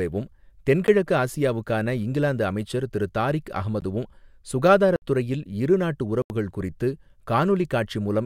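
At 0.87 s, just before "ஆசியாவுக்கான இங்கிலாந்து அமைச்சர் திரு", the speech drops into a block of digital silence about 10 ms long, and at 3.81 s, after "இங்கிலாந்து அமைச்சர் திரு தாரிக்", a 15 ms block follows; both are heard as ticks. Longer holes follow at 4.96 to 5.02 s and at 6.22 to 6.30 s, after "இரு நாட்டு". Zeros replaced those samples, likely because output buffers went unfilled, and the sound cuts out and back with no fade.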